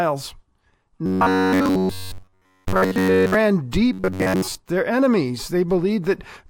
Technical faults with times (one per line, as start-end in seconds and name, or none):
1.06-3.34 robotic sound from repeated short buffers
3.93-4.55 robotic sound from repeated short buffers